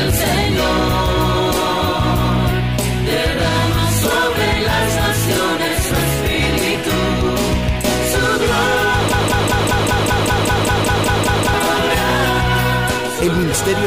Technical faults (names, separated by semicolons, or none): broken-record loop